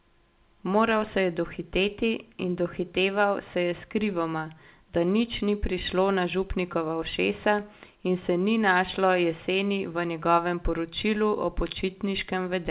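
Nothing is technically wrong with this speech recording, which comes through a call path whose content stops at 4 kHz, consistent with a G.711 mu-law call codec.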